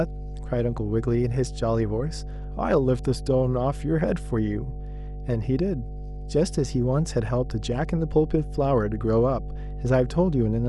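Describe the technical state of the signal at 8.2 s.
At 8.2 s a steady low tone sits under the speech, a 50 Hz drone with some low harmonics above it, running at a fairly strong level well up against the speech rather than faintly in the background. This is mains hum, present throughout the clip rather than only at that moment. Power-line current is leaking into the signal path, most plausibly through a ground loop or from a nearby transformer, so the 50 Hz supply frequency is imprinted on everything recorded.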